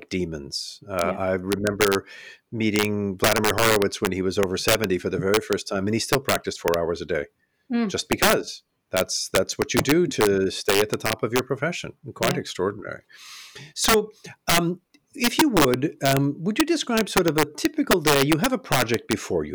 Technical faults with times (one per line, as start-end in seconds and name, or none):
0.00-19.55 integer overflow